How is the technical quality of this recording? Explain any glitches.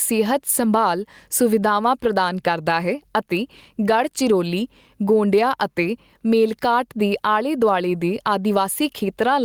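The recording is marred by gain pumping that runs through the whole speech clip. The gain swings by roughly 10 dB, so loud and quiet passages sit unnaturally close in level and the sound feels squashed. The likely cause is input gain set far too high with a fast limiter or compressor clamping down on each peak. Unlike a noise gate, which cuts the background to silence, a compressor lifts quiet material back up once the loud sound ends.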